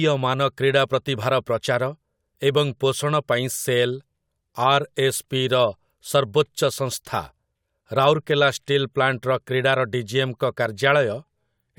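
Listening closely to the speech recording, nothing stood out as a technical problem at any point.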